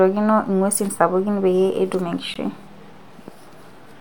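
At 2.34 s, right after "sapuki peyie etum", the speech drops out for about 16 ms. This is a gap at a join of encoded pieces. The audio was encoded in separate sections and then spliced without trimming. Each encoder pass leaves a short run of silence at its start and pads out its final frame. Both survived the join. The result is a brief hole whose edges are smeared by the codec. The speech then resumes exactly where it broke off.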